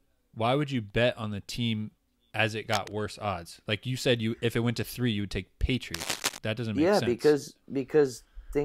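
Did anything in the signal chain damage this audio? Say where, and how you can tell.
Yes, in the analogue wiring. Cable scratch noise rustles over the speech from 2.72 to 2.95 s, about 10 dB down, then louder from 5.94 to 6.38 s, about 5 dB down. That dense, ragged texture suggests a likely worn connector being moved, its contact resistance fluctuating.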